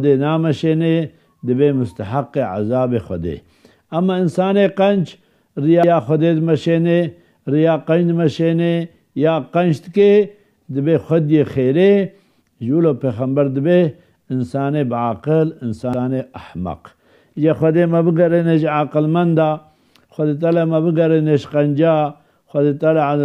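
Overlapping chunks: the audio was handled in blocks about 10 s apart, and each new block began 100 ms before the previous one ended. That slice plays twice, at 5.84 to 5.94 s and again at 15.94 to 16.04 s, heard as a brief stutter at each join.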